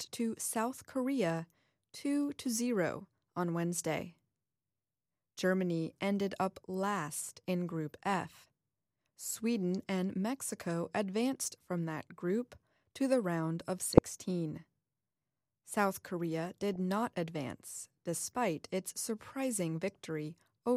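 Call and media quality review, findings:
DAB burbling in the speech at 13.80–14.10 s and 16.74–16.76 s. Short noise blips in single sub-bands. Weak-reception bit errors beat error correction and corrupt the MP2 audio data.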